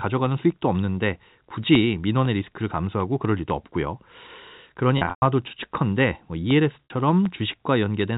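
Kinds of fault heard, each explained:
Packet loss with pitch repetition: Parts of the speech stream went missing, and the receiver covered each gap by repeating the last pitch cycle while fading it down. From 4.98 s about 180 ms is lost, scattered over 240 ms, with a longest run of 120 ms. That run sounds like a held buzz sinking toward silence before speech cross-fades back. At 6.85 s a 60 ms loss gives only a brief, slightly held buzzy tone.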